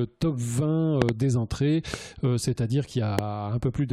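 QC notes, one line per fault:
1.02–1.11 s, loud pop: two sharp pops in quick succession, peaking about 20 dB above the sound, which carries on underneath without a gap.
1.94–1.96 s, loud pop: a single, milder pop, about 10 dB above the sound.
3.19–3.21 s, loud pop: a single pop, about 20 dB above the sound.
A voltage pulse, likely from a switch, plug or static, is added to the signal. Its sharp pop sets it apart from a click or dropout.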